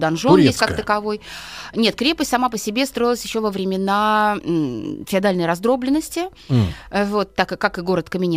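No technical faults can be heard anywhere in this speech recording. Nothing in the audio points to a problem in how it was captured, processed or delivered.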